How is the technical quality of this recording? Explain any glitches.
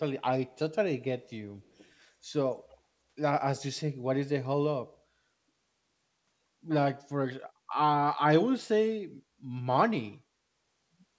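Two brief glitches stand out in this speech recording, both echo leaks, while the call path's band limit, with nothing above 8 kHz as fits G.722 at 64 kbps, is normal for this kind of link.

From 1.63 to 1.91 s, and again from 2.69 to 2.77 s, a faint copy of the speech trails the original by 290 ms, sitting roughly 30 dB below it. The likely cause is a far end playing the call over a loudspeaker, where its echo canceller failed to remove everything the microphone picked up, so scraps of the returned signal leaked back into the call.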